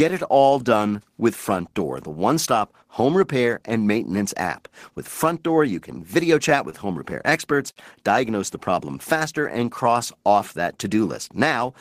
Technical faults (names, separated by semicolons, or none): short stall from a late packet; repeated stalls (stutter); jitter buffer slow-down